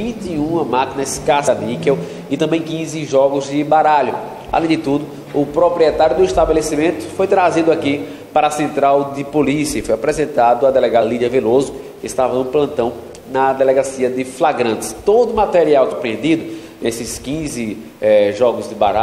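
The audio jumps forward three times, at 1.47 s, 11.01 s and 15.91 s. That's compressed frames being skipped: chunks of the encoded stream either went missing or were thrown out by the decoder as corrupt. The first two drop around a tenth of a second, the last nearer 150 ms. That fits a handful of roughly 23 ms frames each.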